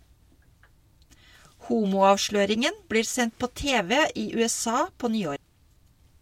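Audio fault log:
5.36 s compressed frames skipped: speech jumps ahead roughly 300 ms, fitting about ten 32 ms frames, leaving no silent gap.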